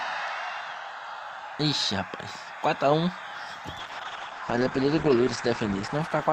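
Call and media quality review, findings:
Call bitrate drop, 3.85 s to end: coarse, muffled sound; spectrogram top cut from 20 kHz to 8 kHz. Encoder starved, fitting a fall from 64 to 10 kbps.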